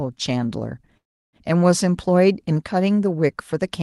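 At 0.97 s the speech stops and the receiver fills the gap for about 0.36 s, until 1.36 s. The fill is a brief continuation of the last sound that quickly drops to near-silence, which lasts most of that stretch. This is a call audio freeze, most likely caused by delayed packets draining the jitter buffer. When the audio resumes, nothing is skipped; the rest of the speech simply arrives about 0.36 s later, band-limited near 12 kHz as an Opus call stream would be.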